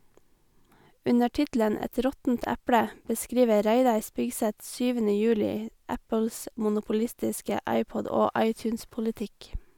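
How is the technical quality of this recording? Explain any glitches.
Good news here: there's nothing going wrong in this recording, so there are no glitches to explain.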